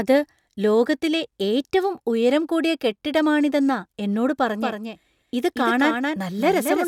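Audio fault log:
4.61 s to end, doubled audio track: after "ഉയരം കൂടിയ കെട്ടിടമാണിതെന്നാ എന്നോട്", a dry, slightly quieter copy lags about 0.2 s, likely from a slower second capture path; the spectrogram repeats every shape.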